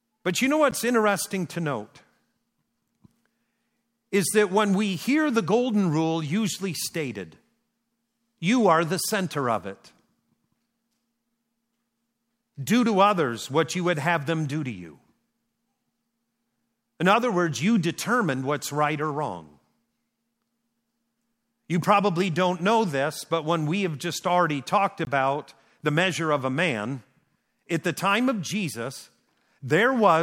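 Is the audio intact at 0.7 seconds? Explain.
No. At 0.71 s there is a block of digital silence: about 10 ms of samples drop to zero with no fade, so the speech breaks with a tick or dip.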